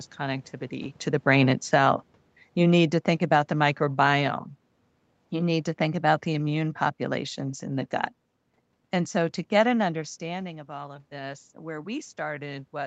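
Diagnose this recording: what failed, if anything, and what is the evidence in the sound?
The failure is automatic gain falling in the call processing stage. Between 2.57 and 4.32 s the speech level drops by about 3 dB, and the room noise underneath sinks with it. That points to a gain change applied to the whole signal rather than the talker moving, which happens around 0.5 s and 10 s and changes only the speech. The AGC judged the input too hot, or its background noise too strong, and pulled its gain down gradually over those 1.75 s.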